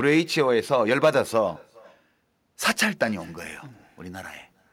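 Throughout the recording, the far end is playing the call over a loudspeaker and its microphone is picking that playback up again, with no echo canceller removing it. This is echo with no canceller. The speech returns after the network round trip, roughly 0.4 seconds late and sitting about 28 dB below the direct voice. Each phrase is trailed by a faint, thin copy that lags just far enough behind to be heard as a separate shadow.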